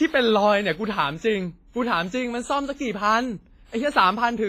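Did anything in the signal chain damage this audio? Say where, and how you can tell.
Yes, at the codec stage. Nothing exists above 15.5 kHz throughout. It is likely low-bitrate audio saved at a high bitrate, which cannot restore the loss.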